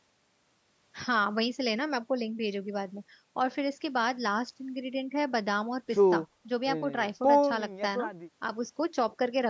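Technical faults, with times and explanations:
No technical faults can be heard anywhere in this speech.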